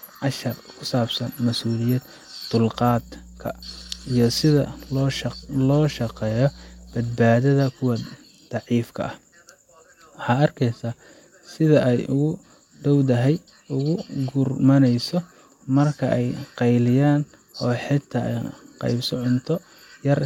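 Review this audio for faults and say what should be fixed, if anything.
Mains hum runs from 2.72 to 7.19 s: a steady 60 Hz tone, roughly 25 dB below the speech, from power-line current leaking into the signal through a ground loop or nearby transformer. Unlike broadband rumble, it holds one fixed pitch. Prevent it by breaking ground loops and keeping cables away from transformers.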